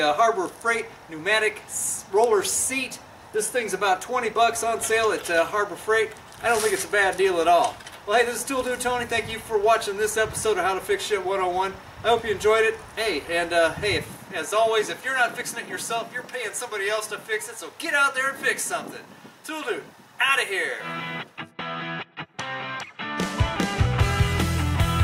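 No technical faults are audible.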